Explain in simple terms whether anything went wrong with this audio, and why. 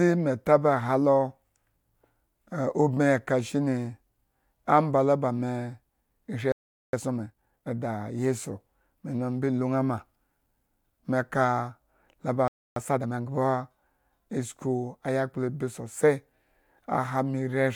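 Twice, the player most likely ran short of data, causing a playback stall: the speech cuts to silence at 6.52 s for 0.41 s and at 12.48 s for 0.28 s.

Each time, time-compressed catch-up followed. The player trimmed tiny slices to clear its backlog, so the speech runs 1.5 times faster at normal pitch, from 6.93 to 7.75 s and from 12.76 to 13.32 s.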